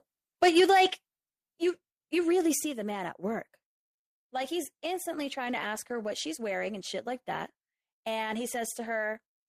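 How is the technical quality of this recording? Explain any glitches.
The technical quality is rough at the start: the opening is distorted, and the level then drops in three separate steps.

From 0.42 to 0.86 s there's microphone overload. The peaks run about 4 dB past what the converter can take, and roughly 7% of the samples get their tops sheared flat. That flattening adds a harsh, crackly edge to the loudest parts of the speech. The likely cause is the mic input gain being set too high for how loud the talker was.

Overlapping with that comes a microphone volume stepped down event, three times. At 0.6 s, while the distortion is still going, the level drops by about 2 dB. At 1.59 s, just before "you you really", it drops by about 6 dB. At 2.61 s, just after "you you really" and before "the man at work", it drops by about 4 dB. Each drop is sudden, and the speech and the background sink together. 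The likely cause is the call software reacting to the loud, clipped input and cutting the device's input volume in single steps.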